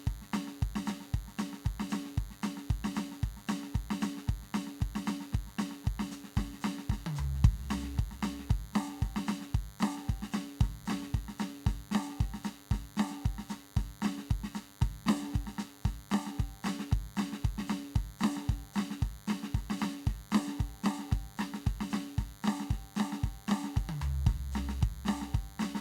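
A nearby DECT cordless phone or base station is firing a radio burst 100 times a second, and the audio circuitry rectifies it, producing DECT cordless phone buzz throughout the music: a steady, thin 100 Hz buzz rich in harmonics, sitting roughly 25 dB below the music.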